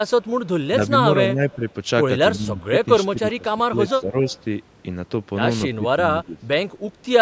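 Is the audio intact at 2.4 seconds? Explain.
No. From 2.36 to 2.61 s the speech dips by roughly 10 dB, as if briefly turned down. This is speech suppressed in double talk, likely an echo canceller mistaking the talker for loudspeaker echo while both sides spoke, and attenuating both.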